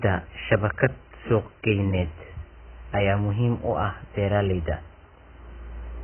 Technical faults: AAC compression

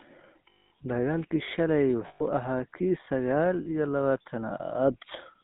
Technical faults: GSM full-rate codec; lost GSM frames

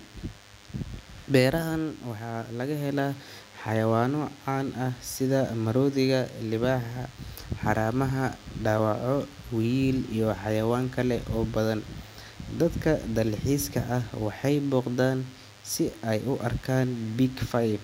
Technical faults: DECT cordless phone buzz

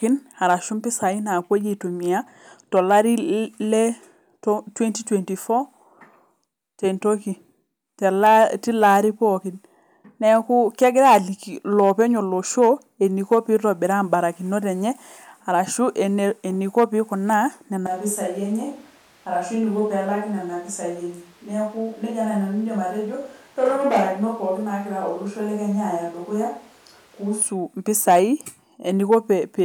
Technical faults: switch to a distant microphone

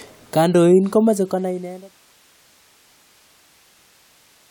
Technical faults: none

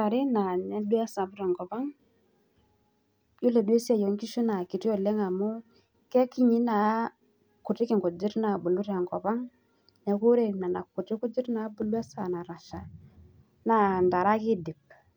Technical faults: none

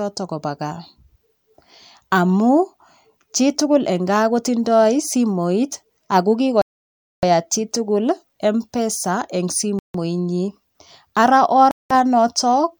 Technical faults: Bluetooth stall

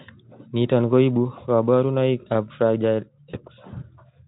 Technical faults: VoIP packet loss concealed by the speech codec

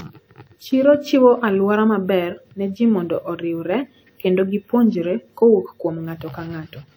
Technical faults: WMA compression

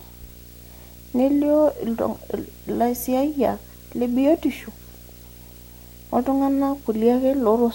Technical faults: video or display buzz; DAB burbling

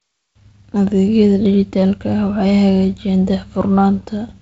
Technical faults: none

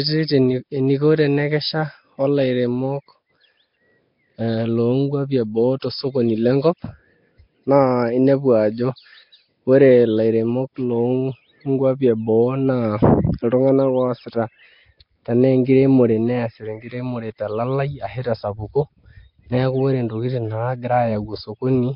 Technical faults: Nellymoser compression

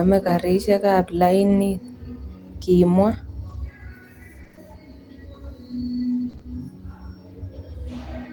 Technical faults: lost packet rebuilt from error correction; scattered short gaps; repeated packet loss (robotic sound)

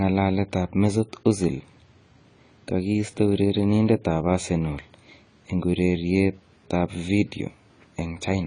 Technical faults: AAC compression

